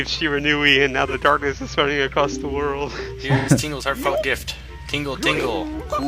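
At 1.07 s and 3.38 s, AAC frame loss with concealment: the decoder rebuilt missing frames from the earlier spectrum, giving smeared, phasey patches of 43 ms and 85 ms.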